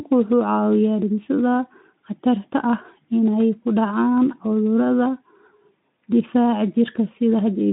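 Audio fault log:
No fault to log for this audio.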